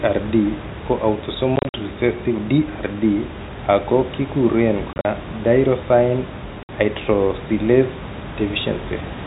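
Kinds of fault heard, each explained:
Packet loss filled with silence: Parts of the stream never arrived, and the receiver played pure silence in their place. The speech is broken by hard-edged holes. This happens near 1.56 to 1.74 s, 4.93 to 5.05 s and 6.63 to 6.69 s. The first two are clusters of short gaps, the longest about 50 ms and 40 ms. The gaps come in steps of 10 ms, which fits 10 ms packets. Even the room noise vanishes inside each hole.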